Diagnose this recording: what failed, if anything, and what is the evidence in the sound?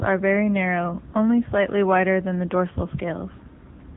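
AMR narrowband mobile codec throughout, codec stage: nothing above 3.8 kHz, and pulse-driven vocal-tract modelling leaves buzzy, synthetic speech, fitting a mode near 8 kbit/s.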